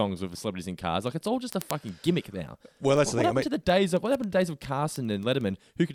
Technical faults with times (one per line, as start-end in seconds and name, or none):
0.17-5.86 word clock ticks